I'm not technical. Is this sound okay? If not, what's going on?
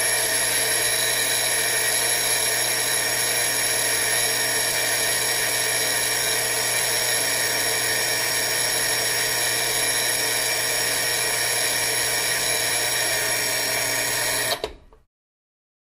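No. There are periodic USB or driver dropouts. From 0.12 s to 15.88 s, a tiny slice of sound vanishes every 0.25 s, about seventy times. Each gap of silence lasts a small fraction of a millisecond. A background task keeps briefly blocking the audio connection, causing regular ticks.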